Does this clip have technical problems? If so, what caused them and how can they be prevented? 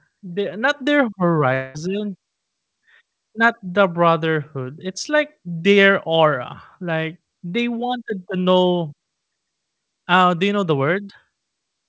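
Yes. From 1.54 to 1.76 s, just after "the not their", the sound turns into a fading buzz, then resumes with about 0.2 s lost. This is likely a long network dropout that the receiver covered by stretching the last sound. A more stable network connection and a deeper jitter buffer would help prevent it.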